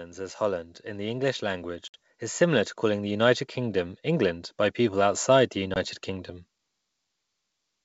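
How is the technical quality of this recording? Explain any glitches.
The recording has two kinds of fault: a slow level rise and two brief dropouts.

From 0.15 to 6.37 s, voice and background swell together by about 10 dB. This is automatic gain rising: the gain control judged the input too quiet and kept raising its gain.

At 1.88 to 1.95 s and 5.74 to 5.77 s there are hard-edged silent holes of 60 ms and 20 ms. Each is followed by slightly distorted speech that settles quickly. This is packet loss on an ADPCM call, a few packets the first time and likely a single packet the second. The decoder's adaptive predictor and step size drift out of step with the sender's until they resynchronise.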